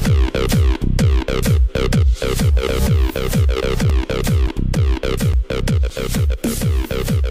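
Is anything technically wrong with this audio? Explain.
Yes. From 3.61 to 6.47 s there are CD scratch ticks. Eleven short clicks fall in a steady rhythm, close to four per second. The longest lasts only about 10 ms. A scratch or blemish on the disc wipes out more data than error correction can restore. It does this once per revolution. The player then fills or mutes the damaged samples. The result is a regular pattern of tiny ticks and brief gaps in the sound.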